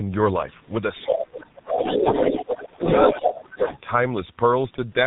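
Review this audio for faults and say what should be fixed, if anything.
Throughout the recording the speech sounds muffled, hoarse and smeared, with consonants losing their edges and nothing audible above 4 kHz. This is heavy G.723.1 codec damage. The codec works on 30 ms frames at a very low rate, which points to its 6.3 kbit/s mode. Its coarse voice model updates too slowly to follow quick articulation, so detail is averaged away. To prevent it, negotiate a wideband codec such as G.722 or Opus instead of G.723.1.

A second voice comes through at about the same loudness as the main talker in three places: briefly at 1.03–1.14 s, then at 1.42–2.68 s, and again at 2.84–3.79 s. This is the other side's voice leaking through, most likely from the far end's audio playing on the talker's loudspeaker and being picked up by the microphone without being fully cancelled. To prevent it, use a headset or tune the echo canceller so its adaptive filter converges and removes the loudspeaker path.

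The main talker's voice ducks and breaks up while the second voice is present. The longest stretch runs from 1.11 to 2.86 s, where it sinks by as much as roughly 25 dB across about one and a half seconds. Shallower dips of about 5 dB occur at 3.07–3.28 s and about 10 dB at 3.54–3.70 s. This is speech suppressed in double talk, likely caused by the echo canceller mistaking simultaneous speech for echo and attenuating everything. To prevent it, use an echo canceller with proper double-talk detection that holds its suppression back when both sides speak.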